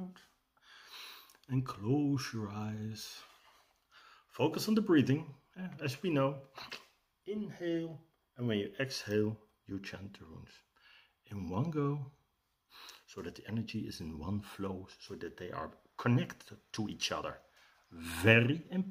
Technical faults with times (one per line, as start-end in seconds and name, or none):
none